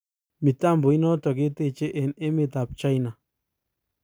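A speech recording with nothing technically wrong with it.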